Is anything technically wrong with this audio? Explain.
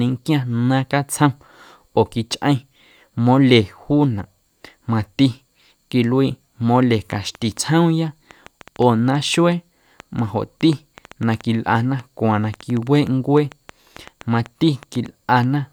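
Yes. A train of clicks runs from 7.12 s to 15.44 s, starting just after "quiluii mole". The likely cause is interference from nearby equipment or a faulty connection or power supply injecting short pulses into the signal. They arrive about 4.7 times a second at an uneven spacing, some forty in all, each with much the same sharp shape and peaking around the level of the speech itself. They are heard as irregular ticking over the speech and through its pauses.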